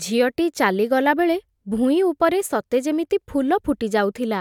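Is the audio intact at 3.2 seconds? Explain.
Yes, at 3.2 seconds the speech plays through intact, with no fault to be heard at that moment.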